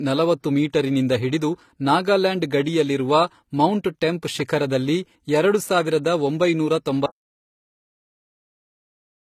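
Speech whose tone is dulled by two different kinds of compression artefact layered together, with nothing above about 14.9 kHz. The likely cause is transcoding between lossy codecs, consistent with a moderate-rate AAC encode re-encoded as low-rate HE-AAC. At 7.06 s the sound cuts out mid-flow into complete silence with no room tone, lasting to the end. This audio dropout to silence points to the input being lost while the recorder kept writing silence.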